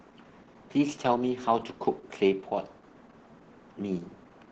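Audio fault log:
Throughout: Opus voice compression. The speech sounds muffled, hoarse and faintly robotic across the whole clip, with nothing above roughly 8 kHz, which points to Opus running its SILK linear-prediction coder at a wideband setting and a low bitrate near 10 kbps. At that rate the coder models the voice's spectral envelope but quantises the excitation coarsely, so breathiness turns rough and buzzy and the damage is heavy.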